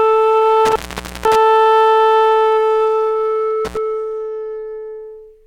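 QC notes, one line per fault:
0.65–1.36 s, intermittent contact: a loose connection in the cable or plug breaks for about 0.49 s. The sound drops out abruptly, leaving faint hiss from the floating line, and crackle marks both edges where the contacts scrape apart and reseat.
3.65–3.77 s, intermittent contact: a loose contact opens again, this time for about 65 ms. The result is a brief gap with crackle at each end rather than a clean cut.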